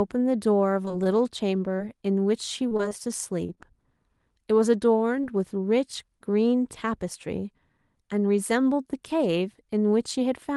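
From 0.85 to 1.81 s, the speech turns choppy and robotic. This is repeated packet loss. Audio kept arriving late or not at all, in gaps no longer than about 21 ms. Each time, the receiver stretched the last sound to cover the hole, and then the next hole came. About 9% of this stretch is patched sound. The same robotic chop returns from 2.69 to 3.59 s, slightly heavier. The longest gap there is about 23 ms, and about 11% of that span is filled in.

From 5.21 to 5.25 s comes a single short concealed packet loss. About 20 ms of audio never reached the decoder in time. The receiver continued the preceding sound briefly and then blended back into the real signal. It is heard as a quick smear or wobble in the speech. Throughout, the call codec's band limit sits near 12 kHz, so there is little air above that.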